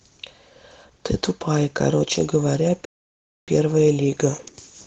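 Throughout, Opus voice compression leaves the speech hoarse and slightly robotic; the plainly audible damage fits around 16 kbps, unlike simple low-pass muffling.

From 2.85 to 3.48 s a playback stall cuts the sound to 0.63 s of silence, likely from starved buffering. Speech then resumes, unlike a dropout.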